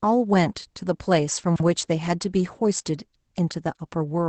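Across the whole speech clip, Opus voice compression is plainly audible. Nothing is present above 8.7 kHz, and the muffled, slightly hoarse and robotic texture fits the SILK linear-prediction coder in wideband mode at a low bitrate of around 12 kbps, with its coarsely coded excitation.

From 1.44 to 1.6 s the chunks play out of order. A 40 ms piece of audio turns up about three chunk lengths late, after material that should follow it. The result is a brief jumbled, garbled moment.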